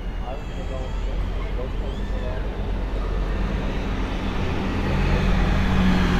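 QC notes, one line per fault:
3.29 s, bit error spike: there's a single sharp tick here, over in two samples, hitting about -35 dBFS. A flipped bit somewhere in memory or on a digital link knocked those sample values off by a power of two, and they snapped straight back afterwards. Because the jump is so brief and has nothing to do with the surrounding sound, its energy smears across the whole spectrum, which is why you hear a dry click rather than anything tonal.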